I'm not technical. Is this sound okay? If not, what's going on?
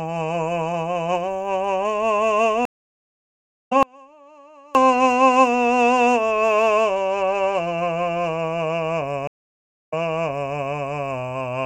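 No. The music has two kinds of fault.

Twice there's a stream reconnect: the connection to the source broke, the player went quiet, then reconnected and picked the music up again. At 2.65 s it goes silent for about a second and comes back roughly a second further along, so a piece of the music is skipped. At 9.27 s the silence lasts about 0.57 s, and the music resumes 0.71 s earlier than where it stopped, so you hear a short stretch repeated.

Between 3.83 s and 4.75 s there's an audio dropout to a faint residue. The likely cause is that the music signal itself was lost for just under a second while the equipment after it kept running. The music cuts out abruptly, not as a pause or a fade, and only a faint trace of sound remains in the gap before the music snaps back.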